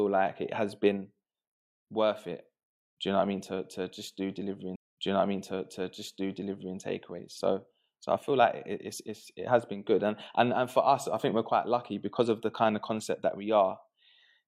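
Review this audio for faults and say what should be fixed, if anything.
A stream segment is repeated from 4.72 s to 6.72 s: roughly 2.0 s of speech plays a second time before "and takeaways", with a small blip at the jump back. The player fetched or queued the same segment twice. To prevent this, track segment sequence numbers and discard duplicates before they reach the playback buffer.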